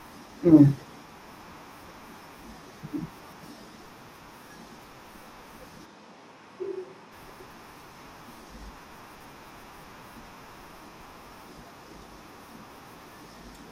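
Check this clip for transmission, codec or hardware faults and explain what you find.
Two kinds of fault turn up in the speech: four brief scrambled passages and one stretch that sounds picked up from across the room.

Frames out of order, at 3.22 to 3.43 s, 7.30 to 7.51 s, 9.15 to 9.26 s and 11.00 to 11.11 s, produce a garbled flutter. Two adjacent blocks, about 105 ms long in the first two cases and about 52 ms in the last two, were swapped before decoding, which fits runs of four and two frames. No time goes missing.

From 5.88 to 7.10 s the voice suddenly turns hollow and roomy, thinner in the bass, about 5 dB quieter, with background noise rising to roughly 25 dB below the speech, before snapping back. This is likely a switch to a distant microphone after the close one dropped out.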